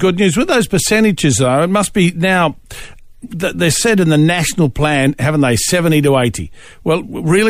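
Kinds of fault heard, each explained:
No kinds of fault are heard in this speech clip.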